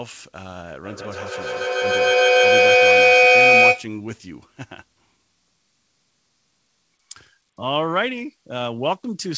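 From 0.84 s to 3.95 s the speech is caught in a feedback echo between two devices. A second device on the same call plays back what this microphone sends, and the microphone picks it up again. The local echo canceller removes only its own playback, so the loop persists. Each word returns about every 150 ms. Instead of dying away, the repeats build until they are about 12 dB above the speech, over a band that stops at 8 kHz, as a wideband call codec would.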